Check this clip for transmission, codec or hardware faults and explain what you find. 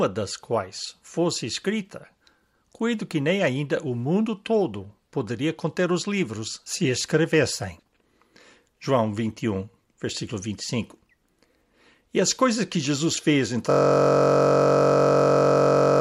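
One hardware fault is present. From 13.71 s, just after "fez em", a system hang loop repeats a 21.33 ms slice (consistent with a 1024-sample buffer) to the end, giving a steady 46.9 Hz buzz.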